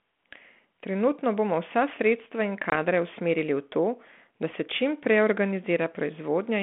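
At 2.70 s the speech, carried over G.726 ADPCM at 32 kbit/s in a 200 Hz to 3.4 kHz telephone band, drops into a hard-edged silent hole lasting 20 ms, about one lost packet. This is packet loss on an ADPCM call. The receiving decoder's adaptive predictor and step size have drifted from the sender's, so at 2.73 s the speech resumes slightly distorted, settling within tens of milliseconds. That mistracking is what sets it apart from a plain PCM dropout.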